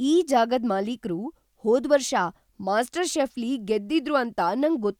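Nothing in this speech recording stood out as a technical fault on listening.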